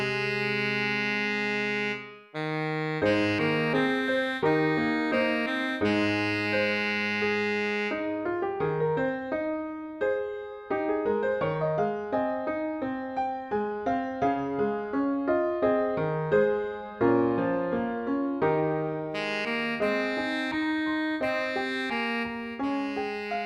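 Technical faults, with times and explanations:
No technical faults can be heard anywhere in the audio, and the signal holds steady and continuous over its whole duration.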